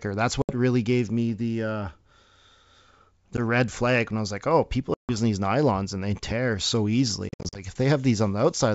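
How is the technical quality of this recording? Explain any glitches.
The recording has four dropouts from packet loss on an ADPCM call. The G.722 wideband coding underneath sounds clear up to about 7 kHz.

The gaps fall at 0.42 to 0.52 s and at 3.37 to 3.40 s, just before "red flag when I". Another runs from 4.94 to 5.16 s, between "was like oh people" and "these nylons and they". The last spans 7.29 to 7.63 s, after "and they tear so". Lost audio runs from 10 ms to 180 ms per gap. The final stretch loses 180 ms scattered across 260 ms, in runs up to 60 ms. Each gap is hard-edged silence. The decoder's predictor and step size drift from the sender's, so speech resumes slightly distorted, then settles within tens of milliseconds.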